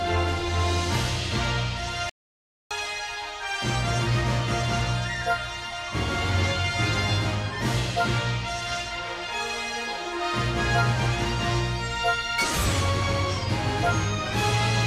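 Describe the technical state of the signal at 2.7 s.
At 2.7 s the sound is still in dead silence, with no room tone, and returns abruptly at 2.71 s. This is an audio dropout to silence from 2.09 s, losing 613 ms, likely from a briefly lost input while the recorder kept writing silence.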